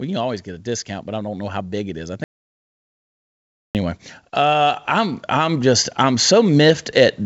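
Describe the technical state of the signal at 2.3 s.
At 2.3 s you're in a dead gap: an audio dropout to silence runs from 2.24 to 3.75 s, about 1.51 s of silence with no room tone at all. The sound just stops mid-flow and picks back up afterwards, and whatever was said in that stretch is gone. The likely cause is the input dropping out, through a disconnect, a failed link or an accidental mute, while the recorder kept writing silence.

Underneath that, automatic gain is rising from 0.64 s right through to the end at 7.25 s. The gain control decided the input was too quiet and keeps pushing its gain up slowly, so the speech and the background swell together over several seconds. At 2.3 s there's nothing for it to lift, but the level on either side of the gap sits at different points on that climb. The G.722 call path still caps everything at 8 kHz.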